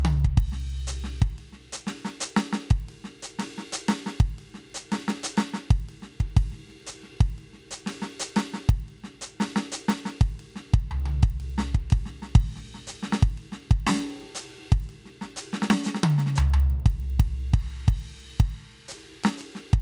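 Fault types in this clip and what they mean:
Resampler restarted on every block: the music was rate-converted in separate chunks, and at each chunk boundary the interpolation filter ran without the true neighbouring samples, leaving a small discontinuity. Boundaries fall every 100 ms, giving a steady tick at 10 Hz that runs through the whole clip and is audible only while the music is playing. The filter behaviour points to upsampling from 24 kHz to 48 kHz.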